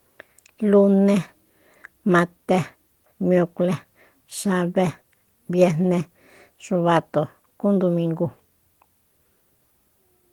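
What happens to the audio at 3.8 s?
Nothing goes wrong at 3.8 s; the speech carries on intact through that moment, with the Opus voice coding leaving only light traces.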